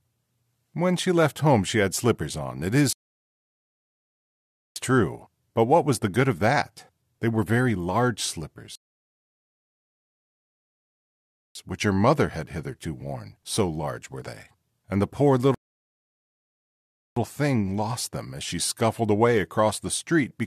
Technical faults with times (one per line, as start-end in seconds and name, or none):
2.93-4.76 rebuffering stall
8.75-11.55 rebuffering stall
15.55-17.16 rebuffering stall